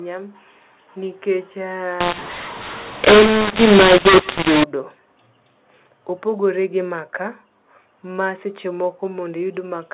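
From 2.01 to 4.64 s, mu-law and A-law mixed up: mu-law coding decoded as A-law scrambles levels, so the speech turns harsh and pauses fill with hiss, unlike codec artefacts.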